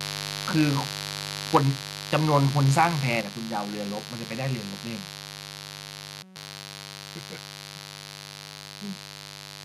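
A steady, raspy buzz runs under the whole speech clip, sitting only about 10 dB below the voice. This is mains buzz: switching spikes from a dimmer, rectifier or unshielded line enter the signal twice per 50 Hz cycle, so the hum is not a pure tone but a dense stack of 50 Hz harmonics reaching well into the kilohertz range. That gives it its gritty, edgy character rather than a smooth drone.

From 1.55 to 1.57 s a loud peak turns harsh and crackly. This is microphone overload: the peak overshoots the converter's ceiling by about 4 dB, and a sizeable share of samples in that stretch are flattened at the converter's limit. Squaring off the waveform tops adds the brittle distortion heard on that syllable. The likely cause is an input volume set too high at the microphone.

At 1.57 s, immediately after that distorted peak, the voice and the buzz drop together by about 3 dB. At 3.21 s they drop again, this time by about 6 dB. 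Each sudden step is a microphone volume stepped down. Because everything in the signal falls at once, including the background, this points to a gain change at the device rather than to the talker moving away. It is likely the call software reacting to a level it judged too hot.

From 6.23 to 6.36 s the audio freezes into a rough, pitched buzz at about 188 Hz. This is a system hang loop. The computer or driver stalled, but the sound hardware kept replaying the same 5.33 ms slice of audio, which fits a 256-sample ring buffer, two dozen or so times in a row. A loop that short repeats fast enough to be heard as a tone rather than a stutter. Roughly 150 ms of real audio is lost behind it.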